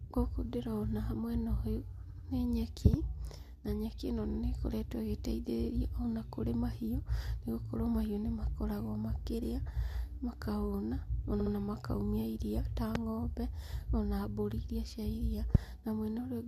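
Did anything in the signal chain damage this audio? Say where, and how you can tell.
Yes. The speech stutters in three places, 2.09–2.26 s, 4.29–4.37 s and 11.39–11.52 s, each time replaying a short stretch, about 85 ms, 43 ms and 64 ms long, twice more. These are repeated frames at the codec or storage stage, adding about 171 ms, 85 ms and 128 ms to the running time.

Sharp single pops cut through the speech at 2.94–2.96 s, 12.95–12.98 s and 15.55–15.57 s, each about 20 dB above the signal and the last nearer 25 dB, while the speech continues underneath. These loud pops are likely voltage spikes in the analogue wiring, such as a plug, switch or static discharge.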